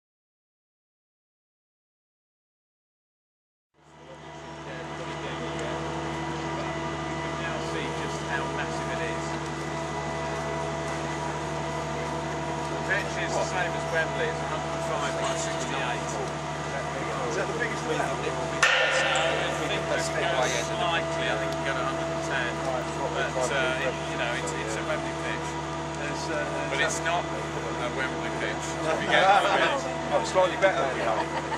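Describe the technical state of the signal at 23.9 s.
At 23.9 s the signal is inside a run of periodic USB or driver dropouts from 22.57 to 24.32 s. Every 0.125 s a tiny fraction of a millisecond is skipped, giving evenly spaced ticks.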